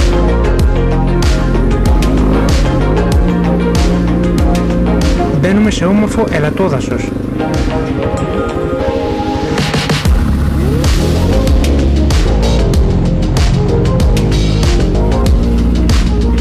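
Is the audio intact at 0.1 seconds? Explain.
No. At 0.1 seconds, as everywhere in the clip, the louder moments carry a gritty distortion, the sound of hard clipping. The signal was driven about 8 dB beyond what one stage in the chain could pass, so its peaks were sliced flat, with around 7 percent of samples pushed past that limit. Those squared-off tops generate extra harmonics reaching high into the spectrum, which is what gives the loud parts their broken edge.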